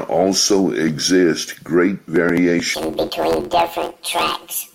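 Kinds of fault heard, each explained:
Planar audio read as interleaved: from 2.74 s to the end, each stored block of all-left-then-all-right samples is read as alternating pairs, so every 11.6 ms slice plays twice at double speed, left then right. The blocks are short, which fits a 512-sample block, so the speech takes on a robotic buzz at about 86 Hz rather than an octave jump. A spectrogram shows vertical striations every 11.6 ms and sidebands spaced 86 Hz apart; the waveform shows compressed segments repeating in pairs.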